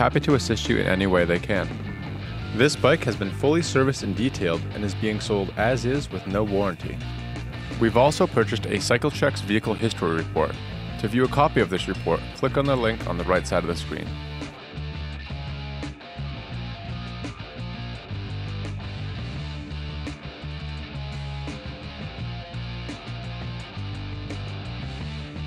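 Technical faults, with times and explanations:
9.78 s, block of digital silence: the sound drops to silence for about 8.9 ms, then returns. There is no fade on either side. At this length the gap is heard as a tick rather than as silence.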